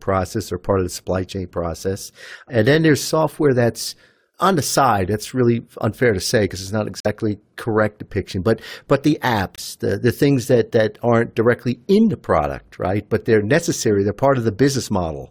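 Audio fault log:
7.00 s and 9.56 s, corrupt frame muted. The speech drops into sudden silence after "say because it's not" for 62 ms, and after "but the" for 36 ms. Damaged compressed frames were rejected by the decoder. The player filled them with silence. The first hole is roughly twice the second, which points to two lost frames against one. Speech resumes at "correct depiction" and "the the things that" with no shift in timing.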